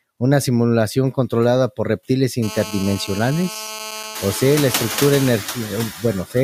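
Noise suppressor artifacts run through the whole recording. The suppressor pulls down bands it judges to be steady noise by about 19 dB, so the background dips between phrases and swells under them. The effect is stronger once the room noise rises at around 4 s.

From 2.43 to 5.29 s a GSM phone buzz sits under the speech. A nearby handset in an active call transmits in bursts at 217 Hz, and the audio circuitry rectifies them into a hard, raspy, harmonic-rich drone about 13 dB below the signal. It stays steady for the whole span.

Speech cut by the noise suppressor follows at 5.91–6.04 s and again at 6.25–6.36 s. Each time the suppressor mistakes part of the speech for noise and turns it down, by about 16 dB and then about 15 dB, for roughly a tenth of a second. Those fragments sound swallowed.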